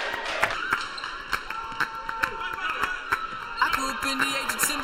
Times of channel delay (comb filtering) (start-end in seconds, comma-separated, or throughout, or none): 0.54-4.84